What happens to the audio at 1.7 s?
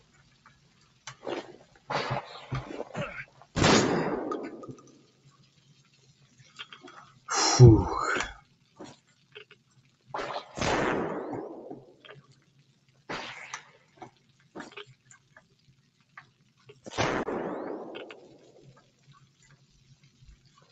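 A speech-oriented noise suppressor left active on this material misreads part of the sound as noise and pulls it down from 1.66 to 1.89 s, about 200 ms in all. This sound cut by the noise suppressor dips by up to about 7 dB, so the sustained or decaying part briefly sinks and thins while sharper onsets pass.

That moment is one instance of the noise suppressor applied to music or sounds throughout the clip, with gain swinging by roughly 20 dB as steady material and tails are ducked.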